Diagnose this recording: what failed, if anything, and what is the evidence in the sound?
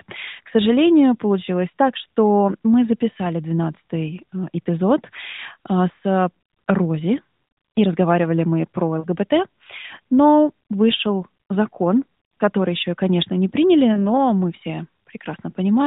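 Brief dips with a warbly, smeared quality at 9.00 to 9.07 s, just after "и разговаривали мы про", and at 13.94 to 14.04 s, just before "мы все". These are lost AMR speech frames at the network stage: corrupted radio frames were concealed by the AMR-NB decoder, which repeated the previous pitch and spectral settings at falling gain. The first gap is about 40 ms, consistent with two 20 ms frames. The second is about 20 ms, consistent with one.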